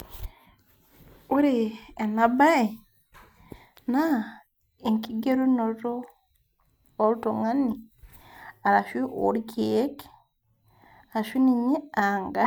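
No technical faults are audible.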